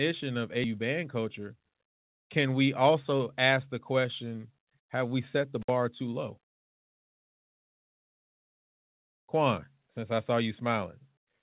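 At 0.64 s the speech lurches forward, with about 0.13 s of transition up to 0.77 s. Roughly 0.4 s of material is simply gone, and the two sides are butted together with no gap or fill, so a chunk of the utterance vanishes mid-flow. This is a skip ahead: a run of audio was discarded, either in transit or when the jitter buffer overflowed, while later audio was already queued. Playback then jumped straight to the newer audio and ended up about 0.4 s closer to real time.

From 1.19 to 1.54 s the talker suddenly sounds rushed, running at 111% speed, though the pitch stays put. A gentler version follows from 2.64 to 3.2 s at 106%. Both are jitter buffer speed-up. After delayed packets arrived in a clump, the buffer held more audio than its target. To shed that backlog, the receiver repeatedly cut out short pitch-period-sized slices, removing about 50 ms in the first stretch and about 40 ms in the second. 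This shortens the sound without shifting its pitch.

Between 5.62 and 5.70 s the signal cuts out for 57 ms, with a crackle at each edge and faint hiss in the hole. This is an intermittent contact: a loose plug or cable momentarily broke the connection, and the clicks come from the contact breaking and remaking. Throughout the clip, the sound is band-limited with nothing above 4 kHz, which fits a G.711 call path.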